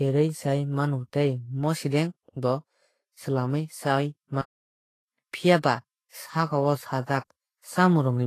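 From start to finish the speech sounds hissy and grainy, with nothing above 14.2 kHz, likely Vorbis compression at a low bitrate around 29 kbps; unlike plain low-pass filtering, the remaining treble is noisy. From 4.41 to 5.07 s the speech halts for about 0.65 s, a playback stall, likely a starved player.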